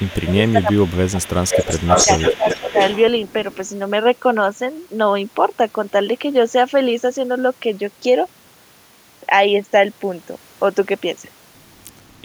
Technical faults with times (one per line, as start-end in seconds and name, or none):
0.00-3.02 echo leak
0.00-1.21 speech suppressed in double talk
1.85-2.09 speech suppressed in double talk
2.37-2.76 speech suppressed in double talk
3.29-3.57 echo leak